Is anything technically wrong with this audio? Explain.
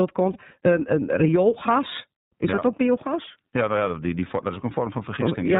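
Yes, there are two things going on. The whole speech clip has been through the iLBC codec, and the damage is plainly audible. It's narrowband, so nothing above 4 kHz makes it through, and the voice comes out clear but somewhat rough and synthetic. iLBC codes each frame's excitation on its own, without leaning on the previous frame. The character here fits its 13.33 kbps mode with 30 ms frames.

On top of that there are two short dropouts from lost iLBC frames, at 0.33 to 0.37 s and again at 2.54 to 2.59 s, each about 30 ms, so a single frame apiece. When a packet goes missing, the decoder fills the hole by repeating the last pitch cycle blended with some noise. You hear a brief held, slightly buzzy or breathy vowel. Since the frames stand alone, the voice snaps back right away.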